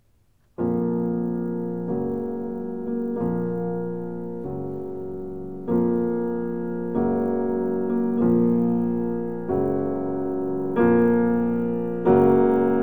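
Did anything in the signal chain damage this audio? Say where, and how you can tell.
Yes. The resampler was restarted on every block in the buffer stage. A 50 Hz buzz runs throughout, only with signal. This fits 20 ms blocks, likely 44.1 to 48 kHz.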